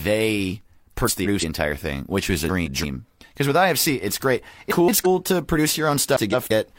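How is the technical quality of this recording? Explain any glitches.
The speech has a recurring glitch. Frames out of order show up four times: 1.07 to 1.44 s (just before "entire thing which was"), 2.46 to 2.85 s (right after it), 4.71 to 5.07 s (between "it's great" and "to produce"), and 6.15 to 6.51 s. Each time, two neighbouring blocks of about 170.7 ms got decoded swapped, so the stretch plays with its halves exchanged. You hear a garbled flutter, though no time goes missing.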